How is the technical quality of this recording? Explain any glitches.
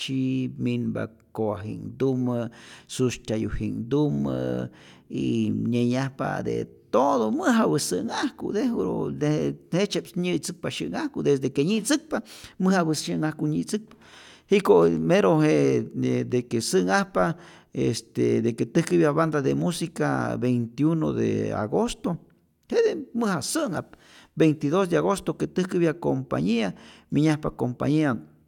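The technical quality of the recording is sound, with no glitches to explain.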